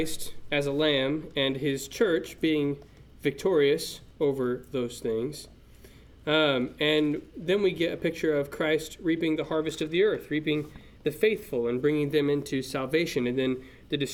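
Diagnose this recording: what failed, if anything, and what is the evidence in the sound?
Nothing failed, and the sound gives no evidence of a fault at any stage of the chain.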